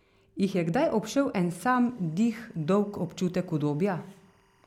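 From 1.71 s, right after "je kdaj obšel en", faint timecode bleed chirps underneath to the end, 24 fps code leaking in, warbling around 1 and 2 kHz.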